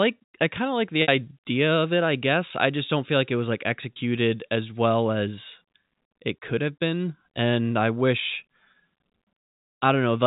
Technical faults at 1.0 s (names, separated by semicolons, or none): packet loss with pitch repetition